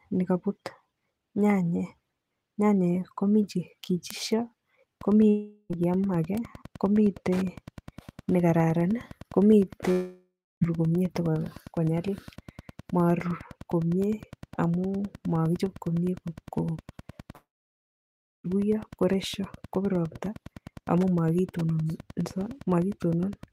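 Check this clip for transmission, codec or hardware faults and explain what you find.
Yes, there are three kinds of fault in this speech clip.

Bit error spikes at 4.11 s (right after "komi che"), 6.38 s and 14.04 s: a single flipped bit in one sample gives a sharp, broadband tick.

Wi-Fi interference runs from 4.95 s to the end: the circuit rectifies beacons every 102.4 ms, giving a steady faint ticking about ten times a second, well below the speech.

Long network dropouts at 5.29–5.72 s, 9.92–10.63 s and 17.35–18.46 s, likely from lost packets: the last sound is stretched into a fading buzz or hiss, then silence, and speech resumes with a chunk missing.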